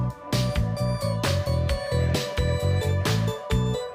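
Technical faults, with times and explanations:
No technical faults detected anywhere in the clip.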